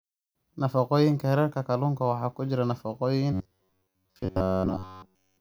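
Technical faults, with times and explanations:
3.33 to 5.41 s, robotic sound from repeated short buffers: the speech turns into a rigid, metallic buzz at 93.8 Hz that still roughly tracks the syllables. The likely cause is audio arriving too seldom, so the last 10.7 ms fragment is looped while roughly 70 percent of the real signal is skipped. A spectrogram shows flat, evenly spaced harmonics at multiples of 93.8 Hz. The waveform shows identical short cycles repeating.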